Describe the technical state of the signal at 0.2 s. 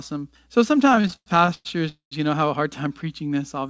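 At 0.2 s the speech signal is intact, carried cleanly through a wideband call path whose band ends at 8 kHz, with no fault present at that moment.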